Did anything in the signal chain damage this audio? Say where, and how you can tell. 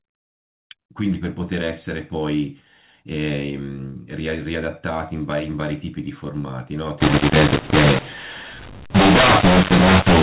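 Yes. From 7.00 s to the end at 10.23 s, the speech turns harsh and gritty and the gaps fill with hiss. That's a mu-law and A-law mix-up at the codec stage. The mu-law G.711 stream was decoded as A-law, so sample levels get scrambled and near-silent samples jump well above zero.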